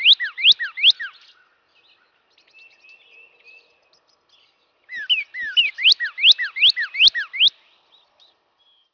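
From start to finish the audio carries aliasing. It sounds like a drop from 44.1 kHz to about 11 kHz with no anti-alias filter in front of it. Everything above the 5.5 kHz fold point gets mirrored back down as tones that bear no relation to the source. Those folded products sit fairly low, maybe 25 dB under the signal, but they're still audible as a gritty, metallic edge on the brighter content. The spectrum also runs right up to the band edge instead of rolling off.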